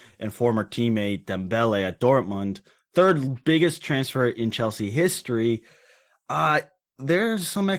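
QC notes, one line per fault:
Throughout: Opus voice compression, plainly audible. The speech sounds hoarse and slightly robotic because the excitation is coarsely quantised, and the band stays fullband, with a CELT layer coding above 8 kHz. This fits hybrid SILK-plus-CELT coding at around 16 kbps in 20 ms frames.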